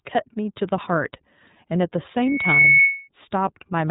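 Throughout, the speech passes through the iLBC codec, which fits 30 ms frames coded independently at a low bitrate. Nothing above 3.8 kHz survives, leaving a plainly rough, synthetic narrowband sound. From 2.19 to 3.08 s, a microphone picks up its own loudspeaker, causing loudspeaker feedback squeal: a 2.2 kHz tone swells within about 0.4 s to roughly 10 dB above the speech.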